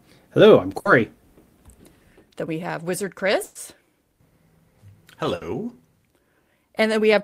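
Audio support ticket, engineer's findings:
Held buzz/fading hiss, then audio jumps ahead: 0.79–0.88 s, 3.43–3.58 s, 5.35–5.44 s. Burst of packet loss on network receive path. Concealment extends last sound and fades it, covering 60 ms, 120 ms, 60 ms respectively; equal stretch of sound missing after.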